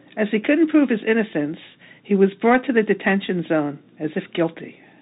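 Throughout, the speech bears Bluetooth CVSD headset codec damage. One-bit delta coding, fitting 64 kbps, strips everything above 4 kHz, leaving scratchy s sounds over granular hiss.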